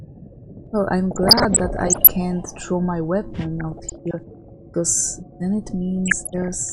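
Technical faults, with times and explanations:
Throughout: MP2 compression. The sound is dull and gurgling, with a granular edge. Upper sub-bands drop out and flicker, and the remaining bands are coarsely quantised. This plainly audible damage likely comes from MPEG Layer II coding at a low rate, which fits about 80 kbps.
1.11 to 2.11 s, 3.58 to 4.55 s, 6.06 to 6.54 s: DAB burbling. Short blips of noise appear in single sub-bands. Bit errors slip past error correction into the MP2 data. Corrupted samples put short blips of noise in single sub-bands, and corrupted scale factors make sub-bands jump in level for up to a frame. The error rate is under one percent.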